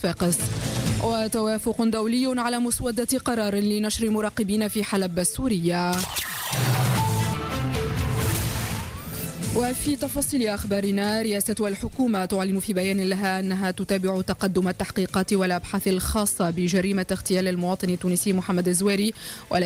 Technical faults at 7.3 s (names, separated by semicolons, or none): skip ahead